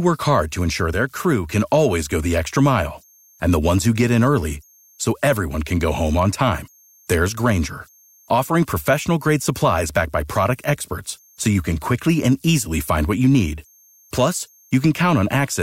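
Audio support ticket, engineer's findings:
Converter idle tones, whole clip. Faint whistle near 7 kHz, most audible in pauses, with grainy hiss under quiet speech, about 39 dB below signal. Probable component: undithered delta-sigma ADC/DAC settling into repeating bit patterns at low input levels. Spectrogram shows a thin horizontal line around 7 kHz through the gaps. Waveform shows no visible change at this level.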